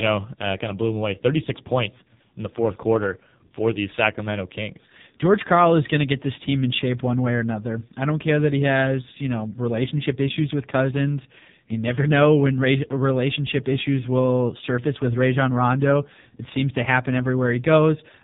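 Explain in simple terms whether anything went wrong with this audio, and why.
The speech has been through the AMR narrowband mobile codec, the compression used for 2G and 3G phone calls, for the whole clip. Nothing above about 3.8 kHz survives, so it sounds boxed-in like a phone line. Unlike a plain phone-band filter, which only muffles, this codec rebuilds the voice from a rough model, and at its heavily squeezed setting here the voice turns buzzy and robotic.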